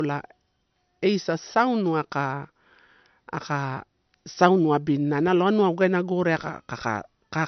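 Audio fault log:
throughout, low-bitrate audio saved at a high bitrate: speech sounds dull and smeared with nothing above 6.1 kHz, likely a low-rate MP3 later re-encoded at a high rate.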